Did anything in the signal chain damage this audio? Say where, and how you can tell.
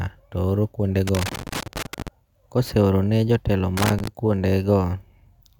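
Yes. The damage is in the analogue wiring: loose connector crackle. Irregular crackle and scratching runs from 1.07 to 2.08 s, between "picha to oro" and "koseorone jotelo", and again from 3.77 to 4.08 s. A worn contact kept making and breaking, chopping the speech signal.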